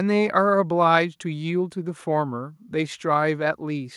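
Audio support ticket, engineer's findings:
No faults found on review.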